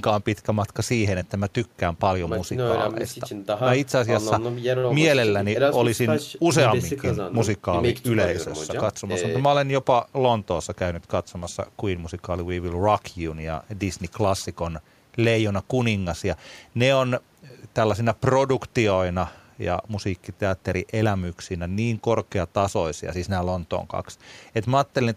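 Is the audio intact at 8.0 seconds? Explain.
Yes, at 8.0 seconds the speech plays through intact, with no dropout, click, distortion or other technical fault at that moment.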